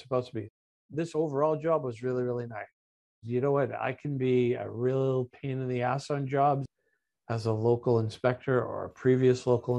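No technical faults can be heard anywhere in this audio.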